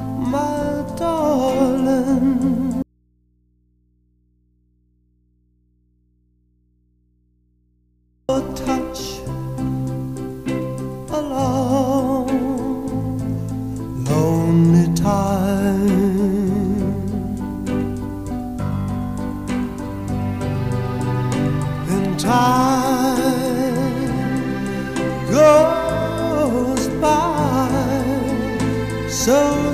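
An audio dropout to a faint residue runs from 2.82 to 8.29 s. The waveform collapses abruptly to near-flat hum roughly 45 dB down, likely an upstream signal loss with the path left live.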